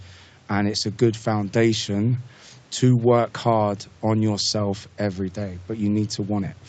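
No technical faults are audible.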